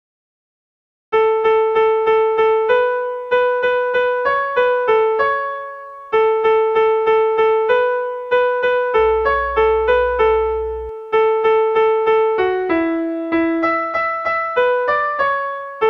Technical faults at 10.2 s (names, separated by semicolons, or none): mains hum